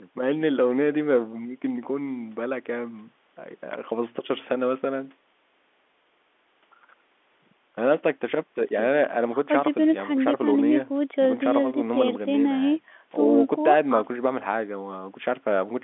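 No technical faults can be heard at any point in this speech.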